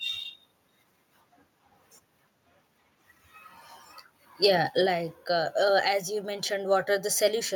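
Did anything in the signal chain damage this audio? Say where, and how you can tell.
Yes. At 4.44 to 4.46 s a peak goes harsh and crackly for a brief moment, with its top flattened rather than rounded. This is likely microphone overload at the converter stage: the input drove about 4 dB past full scale, so a small share of the samples, around 3 percent, were cut off flat. Because the distortion sits only on that loud peak and the level around it doesn't change, this is clipping and not a codec artefact or a gain change.

The microphone volume stepped down twice. At 4.86 s the sound and its background both drop by about 5 dB at once, and at 5.88 s they drop again by about 3 dB. This points to call processing, likely automatic gain control reacting to the overloaded peak and lowering the device's input volume. A fade or compressor would ease the level down gradually. These are abrupt steps that then hold, which marks them as changes to the input volume setting.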